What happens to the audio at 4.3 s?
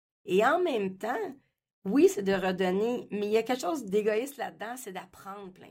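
Zipper noise runs from 3.81 to 4.46 s, just after "il y a quelque", as the level drops by roughly 10 dB in unsmoothed 2 dB steps, about ten per second. Each abrupt step leaves a small click, so the speech carries an audible ticking while it fades.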